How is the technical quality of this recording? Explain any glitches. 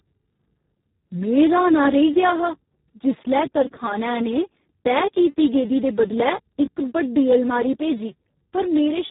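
Technical quality is poor. The speech carries heavy Speex codec damage from start to finish. Speex is a CELP coder, and at a very low setting, around 4 kbps, it has almost no bits left to describe the excitation. The coded speech therefore sounds hoarse and noisy, edging toward a robotic, vocoder-like buzz. The bandwidth is also cut off, with nothing audible above 3.8 kHz, so the speech sounds narrow and muffled, like a telephone line.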